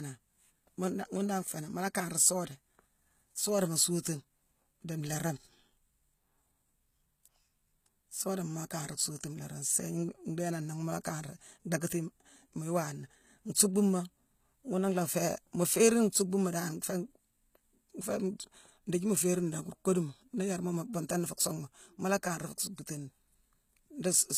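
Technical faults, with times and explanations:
Throughout, HE-AAC compression: the speech has a gritty, metallic top end, with s sounds turning lispy and nothing above about 14.9 kHz. The treble is likely rebuilt by copying lower bands upward, and the damage is plain enough to suggest a bitrate near 20 kbps.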